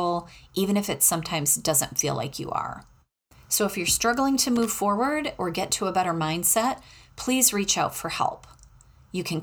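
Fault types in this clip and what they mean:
Loose connector crackle: from 4.56 to 4.65 s, just after "if you're struggling to" and before "forward or get to", the speech breaks into a short, ragged burst of scratching lasting about a tenth of a second. A worn or dirty contact in the signal path is touching and lifting in quick succession, so the audio is switched on and off irregularly.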